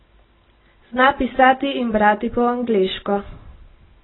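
From start to finish the speech sounds dull and smeared. Nothing is heard above 4 kHz. Sibilants turn fizzy and vowels warble. The likely cause is heavy AAC compression, with the top band cut and the rest coarsely quantised. This fits AAC-LC near 16 kbps.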